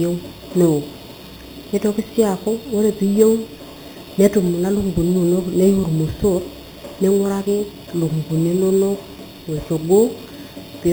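Imaging from sample-and-hold upsampling runs through the whole speech clip: each sample was repeated, without smoothing, to reach 44.1 kHz from what sounds like an 8 kHz source. Mirrored copies fill 4 to 8 kHz at about 21 dB down, heard as a bright metallic fizz tracking the speech.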